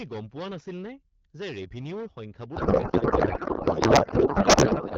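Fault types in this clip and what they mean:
hard clipping: the speech is pushed about 13 dB past what a stage can pass, so roughly a tenth of samples get flat-topped peaks and a harsh fuzz throughout.
codec payload misread: from 2.56 s to the end, octet-aligned AMR frames are being read as bandwidth-efficient, so the speech turns into garbled noise and warble that barely tracks it.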